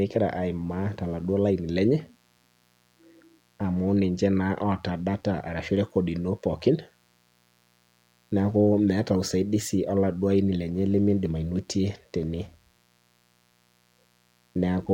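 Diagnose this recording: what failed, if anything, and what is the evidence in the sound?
Mains buzz runs through the whole recording, a steady raspy buzz sitting well below the speech, roughly 40 dB down, present in pauses as well as under talking. The fault lies in the analogue wiring stage: a dimmer, rectifier or poorly shielded cable is injecting sharp switching spikes on each half of the 60 Hz mains cycle, so the interference carries a dense ladder of 60 Hz harmonics extending into the kilohertz range rather than a pure hum.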